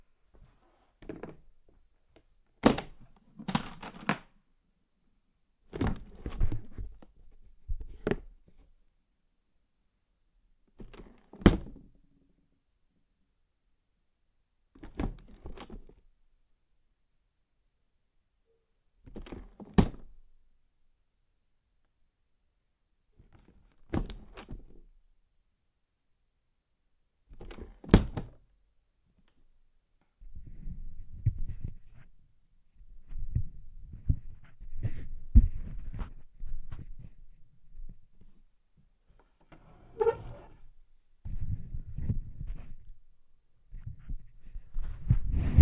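No technical faults can be heard anywhere in this recording of sounds.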